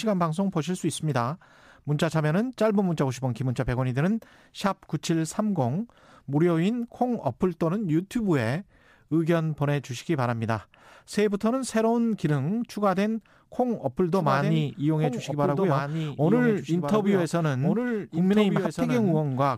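An unstable converter clock samples the speech a few microseconds early or late at random. That timing error grows with how fast the waveform moves, so sample clock jitter adds a faint hiss and roughness, about 40 dB down, on louder and brighter passages that falls away in pauses.

From 14.13 s to the end, the same audio is mixed in a second time, likely captured again through a slower path. This doubled audio track trails by roughly one and a half seconds, about 5 dB quieter, full-band and dry, and cuts in abruptly.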